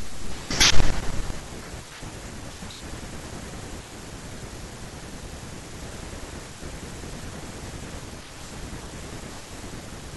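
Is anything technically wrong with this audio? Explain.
Yes. From 0.62 to 0.79 s the speech shows hard clipping: for that stretch the signal runs about 2 dB past what one stage of the chain can pass, so its peaks are sliced off flat. Those squared tops add harmonics high up the spectrum, heard as a brief crackle on the loudest moments. Unlike soft saturation, which rounds peaks into a warmer thickening, this edge is abrupt and gritty, and it stops when the level drops.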